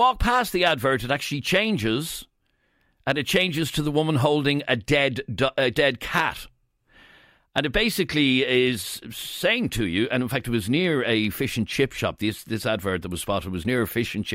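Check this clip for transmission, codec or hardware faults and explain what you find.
One fault runs through the whole clip: clock slip clicks from 0.14 s to 14.31 s. A single sample is dropped or repeated roughly every 40 ms, likely because two unsynchronised clocks drift apart by around 500 ppm. The result is a soft rattle over the speech. A spectrogram shows faint, evenly spaced vertical lines, and the waveform shows tiny one-sample steps.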